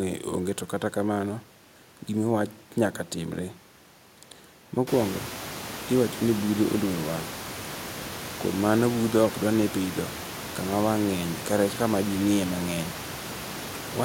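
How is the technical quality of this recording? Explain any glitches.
No technical glitches are audible.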